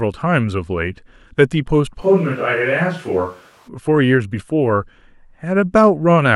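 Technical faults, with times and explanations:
2.03–3.67 s, switch to a distant microphone: the speech turns abruptly roomy and hollow, with thinner bass, then snaps back just as suddenly. The likely cause is the close microphone dropping out, leaving only a farther pickup that captures more room sound. Loudness stays about the same, and the background noise sits roughly 35 dB below the speech. On a spectrogram the low end thins and reverberant smearing fills the gaps between syllables. The waveform loses its crisp onsets.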